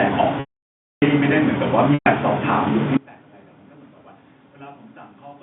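Packet loss with pitch repetition occurs twice. From 0.40 to 1.02 s, about 620 ms of audio is missing, which fits a run of 20 ms packets. The receiver repeats the last pitch period, so there is a brief buzzy hold that fades out over roughly 50 ms. Silence follows, and the speech returns through a short cross-fade. At 1.94 to 2.06 s a shorter 120 ms gap behaves the same way: a held buzz that decays, a moment of silence, then a cross-fade back in.

From 2.98 s to the end of the clip there is an audio dropout to a faint residue. The speech cuts out abruptly rather than fading. What remains is a faint sound roughly 25 dB below the normal level, and it continues until the clip ends. The likely cause is the wanted signal being lost upstream while the path after the break stayed live. The G.711 telephone band, about 150 Hz to 3.6 kHz, frames all of this.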